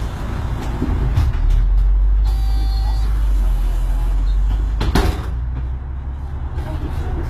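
A recording of everyday sounds carries plainly audible HE-AAC compression damage from start to finish. The treble stays bright but sounds synthetic and gritty, with a metallic sheen on sharp transients, and nothing sounds above about 14.9 kHz. This is likely HE-AAC at a very low rate, roughly 20 kbps, where the upper band is rebuilt from copied lower bands. Ordinary low-bitrate MP3 or AAC would instead dull or swirl the top end.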